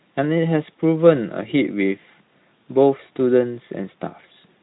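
No faults found; the speech sits in a Speex-coded band with nothing above about 3.8 kHz.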